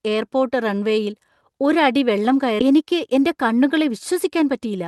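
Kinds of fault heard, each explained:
Skip ahead: at 2.59 s playback jumps straight forward with no gap filled, so roughly a second of speech is simply missing. Audio that was lost on the way or overflowed the jitter buffer was discarded, and the two sides of the jump are joined almost directly.
Jitter buffer speed-up: from 2.72 to 4.76 s the speech runs about 7 percent fast at unchanged pitch. The receiver, holding too much buffered audio, trims short pitch-period pieces repeatedly, around 150 ms in total, which makes the delivery sound hurried.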